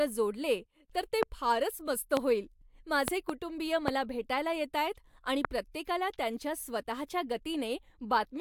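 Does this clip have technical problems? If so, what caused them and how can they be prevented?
Yes. There are loud pops at 1.23–1.25, 2.17–2.19, 3.88–3.90 and 5.45–5.47 s, plus two in quick succession between 3.08 and 3.32 s, each about 20 dB above the speech. The likely cause is sudden voltage pulses from a loose plug, switching, static or a driver glitch, added on top of the signal. Unlike a dropout, the speech continues uninterrupted beneath each pop. Secure the connectors, ground the equipment, and keep drivers stable while recording to prevent this.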